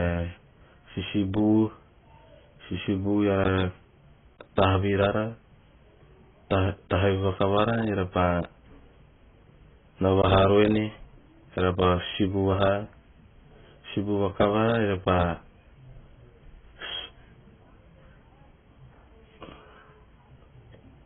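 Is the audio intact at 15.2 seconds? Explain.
No. At 15.2 seconds, as throughout the clip, the speech sounds dull and smeared, with nothing above 3.8 kHz and a warbling, fizzy texture on sustained sounds and sibilants. This is likely heavy AAC compression. At a low bitrate, consistent with about 16 kbps AAC-LC, the encoder lowers its cut-off, drops spectral detail it judges least audible, and patches bands with substitute noise, leaving gaps and swirling artefacts.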